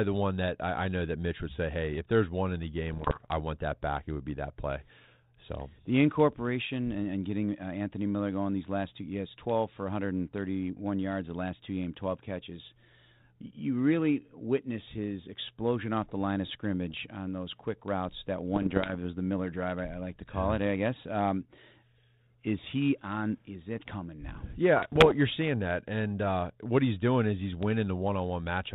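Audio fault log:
2.90–3.32 s, 16.90–17.01 s, 18.52–18.96 s, 24.76–25.17 s: bit errors on an ADPCM link. Scattered pops and rough bursts with brief level jumps from around one corrupted bit in a hundred. Each error throws off the decoder's step size and predictor, so the damage rings on for a few milliseconds rather than leaving a clean gap like packet loss.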